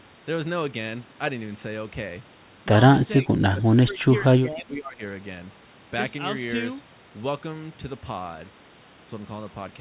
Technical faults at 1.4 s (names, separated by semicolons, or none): none